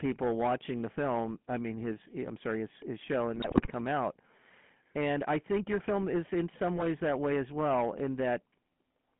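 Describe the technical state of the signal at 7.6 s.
At 7.6 s, as throughout the clip, the level is driven about 9 dB past what a stage can pass, so around one sample in twenty has its peak sliced flat. This hard clipping adds crackle and fuzz on the loud parts of the speech. The speech has also passed through a GSM full-rate codec, which fits a 13 kbps phone link. It rebuilds the voice from a vocal-tract model and sparse pulses within a 150 Hz to 3.4 kHz band, leaving it muffled, buzzy and gravelly.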